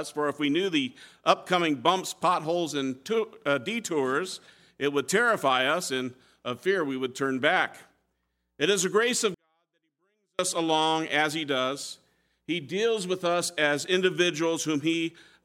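At 9.34 s the sound drops abruptly to near silence until 10.39 s. This is a 24-bit alignment error: low-byte samples read as 32-bit, about 48 dB quieter.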